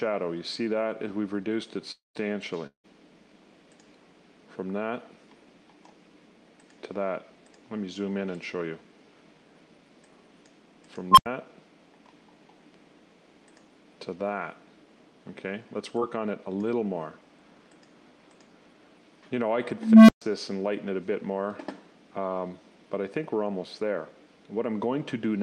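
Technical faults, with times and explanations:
1.91–2.17 s and 2.67–2.86 s, long network dropout. About 240 ms of audio goes missing in the first gap and about 180 ms in the second. Each time the last sound carries on briefly as a fading buzz, then drops to silence, for about 140 ms and 100 ms. The audio then resumes with the lost stretch simply gone. The cause is likely a network stall long enough that the receiver's concealment ran out.
11.11–11.26 s and 19.77–20.22 s, unstable filter. A recursive filter runs away. At 11.11 s a tone near 1 kHz swells in about 60 ms, clips, and cuts to silence for about 86 ms. At 19.77 s a lower tone, around 200 Hz, builds more slowly, over about 320 ms, then goes silent for about 130 ms. The silences are the overflowed output being muted until the filter resets.
16.00–16.03 s, short concealed packet loss. About 20 ms of audio failed to reach the decoder in time. 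The receiver extended the preceding sound to cover the gap, then blended back into the real signal. The result is a brief smear or wobble lasting a few hundredths of a second.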